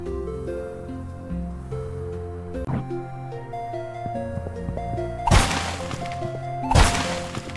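No technical faults are audible anywhere in this recording.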